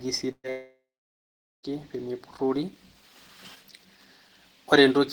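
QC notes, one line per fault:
0.31–0.47 s, burst of packet loss: about 120 ms of speech never arrives. The receiver stretches the last sound into a fading fill over the gap, with roughly the final 50 ms going silent, then the speech resumes with that stretch missing.
0.50–1.66 s, long network dropout: a likely cause of this gap, where about 1.14 s of speech is lost. A brief concealment tail fades out, leaving about 0.82 s of silence before the speech returns further on, without the lost portion.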